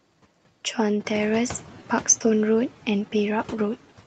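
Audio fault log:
Throughout: noise suppressor artifacts. Background noise is pushed down about 10 dB frame by frame, so the noise sinks between words and rises under them.
1.04–1.65 s: noise suppressor catching up. Room noise jumps about 12 dB near 1 s. The suppressor's estimate lags, cutting only about 5 dB until it adapts after 610 ms.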